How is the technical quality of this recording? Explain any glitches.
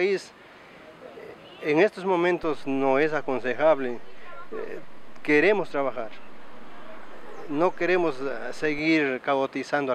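One technical fault stands out: a DC step. At 2.43 s the waveform's zero line jumps by about -33 dBFS and holds until 8.79 s, when it returns. Each jump gives a low thump, unlike a dropout or edit click, because the sound itself carries on untouched.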